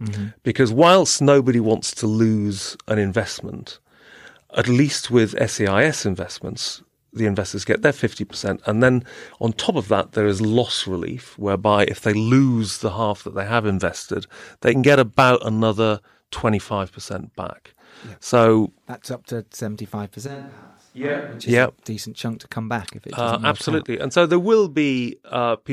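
Speech, with one fault: a switch to a distant microphone from 20.28 s to 21.40 s, immediately after "up to seventy five". For about 1.1 s the voice turns roomy and hollow, loses its low end, falls by about 10 dB, and sits over an audible room-noise floor roughly 35 dB below the speech. The likely cause is the close mic's signal dropping out, leaving a farther pickup. The close sound cuts back in abruptly before "is a decent chunk".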